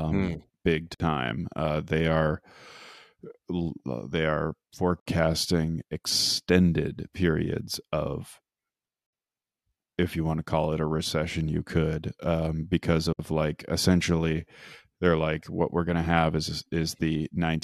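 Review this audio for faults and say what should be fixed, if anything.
Gap at a join of encoded pieces: silences of about 60 ms at 0.94, 5.00 (after "they are"), 9.06 and 13.13 s, every 4 s. Separately encoded segments keep their encoder delay and final-frame padding. Trim both from every segment before concatenating, or encode the whole stream in one pass.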